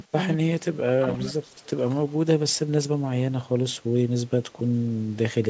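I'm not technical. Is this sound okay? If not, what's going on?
No. At 0.11–0.16 s and 0.35–1.2 s the voice sinks away, likely speech suppressed in double talk: the echo filter turned it down because both people spoke at once.

From 1.08 to 1.7 s a faint copy of the voice follows 0.22 s behind, likely an echo leak from a loudspeaker: a distinct repeat, not smooth room reverberation.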